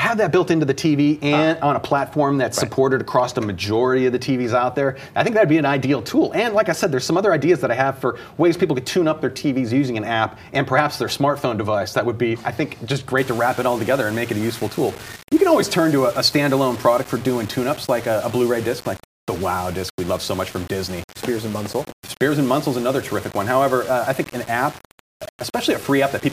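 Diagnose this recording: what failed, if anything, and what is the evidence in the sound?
From 13.18 s to the end, the sound turns grainy, with a rough distortion that rises and falls with the level, and the quietest passages sputter or drop to silence. This is low bit depth without dither, likely from a sample-format conversion that rounded to 6 bits. The error tracks the signal at only about 20 dB below it. On a waveform the trace becomes visibly stair-stepped. A spectrogram shows a raised, signal-correlated haze that vanishes in the gaps.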